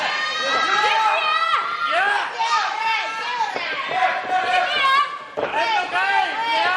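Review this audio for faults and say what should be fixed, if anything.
Hard clipping occurs from 0.57 to 1.55 s and again from 4.54 to 5.01 s. Peaks were driven past full scale by about 4 dB, then about 3 dB. Their tops are cut flat, adding harsh high harmonics. Leave more headroom by lowering gain before the converter.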